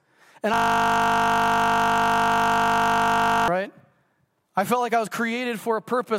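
From 0.54 s to 3.48 s the speech gives way to a system hang loop. The machine froze while the audio hardware kept replaying one 20 ms slice of its buffer. That slice repeats exactly, well over a hundred times. It sounds like a steady 50 Hz buzz.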